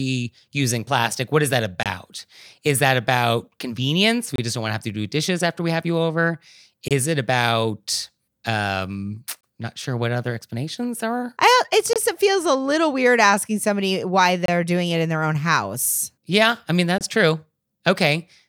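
A gap between chunks cuts the speech seven times, at 1.83, 4.36, 6.88, 9.41, 11.93, 14.46 and 16.98 s. The first follows "plastic what is that" and the last follows "I mean". Each hole is 25 ms of hard-edged silence, recurring every 2.5 s at each chunk join.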